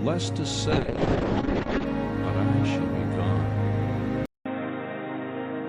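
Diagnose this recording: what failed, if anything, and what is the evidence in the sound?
A call bitrate drop hits the codec stage from 0.73 to 1.92 s. The rate falls from 96 to 6 kbps for about 1.1 s, so the encoder quantises coarsely and narrows the band from 20 kHz to 8 kHz. The sound turns rough and muffled until the rate recovers.

At 4.26 s there is a 200 ms silence, then the band stops at 3.8 kHz, the level drops by around 5 dB and a new noise floor sits roughly 30 dB down. This points to the input likely being switched to a poorer device at the driver level.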